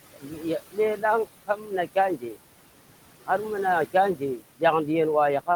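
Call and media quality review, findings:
Noise suppressor artifacts, whole clip: room noise sits about 15 dB under speech and is pulled down about 17 dB in pauses, then swells back under speech. Suppressor gain tracks frame by frame. Spectrogram: patchy, flickering noise floor that goes dark between phrases.

Speech cut by the noise suppressor at 0.11–0.44, 0.60–0.78, 1.47–1.71 and 2.17–2.37 s: soft speech is swallowed, with drops of about 18, 17, 13 and 14 dB. The suppressor is classing low-level speech as noise. Waveform shows envelope dips. Spectrogram shows faded speech harmonics.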